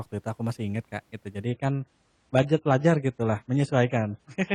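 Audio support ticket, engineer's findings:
Sudden quality drop at 1.46 s, lasting to the end of the clip: adaptive stream switched to a lower bitrate. Nothing above 10 kHz, smeared artefacts, no gap. Sounds like an AAC step down from roughly 96 to 24 kbit/s after the connection slowed.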